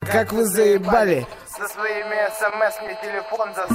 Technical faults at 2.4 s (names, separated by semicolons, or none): scattered short gaps